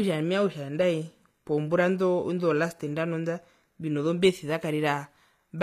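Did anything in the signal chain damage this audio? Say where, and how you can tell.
Yes, at the codec stage, likely HE-AAC compression: throughout, treble above the crossover is copied from lower bands and stops near 14.9 kHz, giving plainly audible damage consistent with a low bitrate around 24 kbps.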